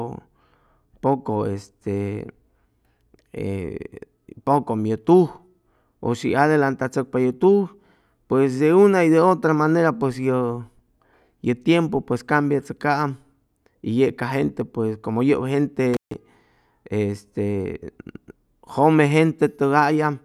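At 15.94 s the speech drops out through an intermittent contact, lasting until 16.14 s. A loose plug or cable connection briefly opens the signal path for about 147 ms, so the sound vanishes, with crackle at the break and reconnection and faint hiss in the gap.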